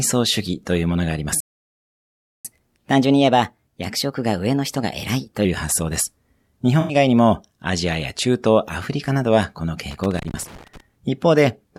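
At 1.40 s the speech stops dead in mid-flow. Silence lasts about 1.04 s, until 2.45 s. Then it resumes. This is a playback stall. The player likely ran short of buffered data, or its thread was blocked, so the output had nothing to send.

From 2.45 s to 5.45 s comes catch-up at higher speed. The player resamples its backlog to regain some of the lost time. Delivery runs at 1.1 times normal speed. Pitch rises by roughly a semitone and a half. At 5.45 s both settle back to normal.

At 6.81 s there is a brief smeared, phasey patch lasting about 85 ms, to 6.95 s. This is AAC frame loss with concealment. The decoder lost several consecutive frames and rebuilt them from the last good spectrum. The gap's length fits four frames of 1024 samples at 48 kHz.

From 9.90 s to 10.80 s an irregular burst of crackle and scratching rides over the speech. This is loose connector crackle. A worn or dirty contact keeps making and breaking, chopping the signal. 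Any DC on the line adds pops.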